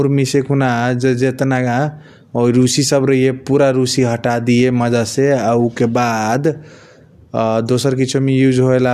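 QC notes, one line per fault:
No faults were heard anywhere in the speech.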